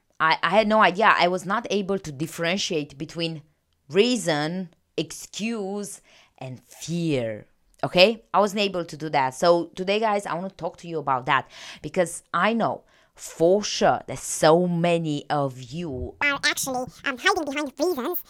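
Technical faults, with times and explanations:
16.22 to 18.29 s, section at the wrong speed: The final stretch of speech plays about 1.92 times too fast. Pitch and tempo rise together, so the voice jumps roughly ten semitones higher and sounds hurried. The likely cause is playback against the wrong clock.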